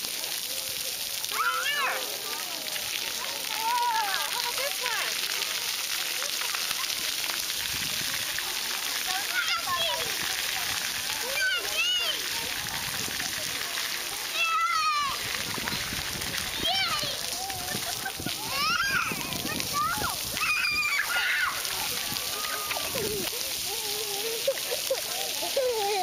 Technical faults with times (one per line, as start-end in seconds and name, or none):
none